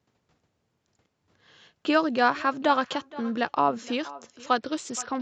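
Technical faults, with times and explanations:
Throughout: echo with no canceller. The far end's loudspeaker feeds its microphone unchecked, so the speech returns roughly half a second later as a thin copy about 18 dB down.
4.56 to 5.22 s: Bluetooth SBC bit pool drop. The link cut the bit pool from 31 to 8, about 66 kbps, so treble dulls and gritty quantisation noise rises.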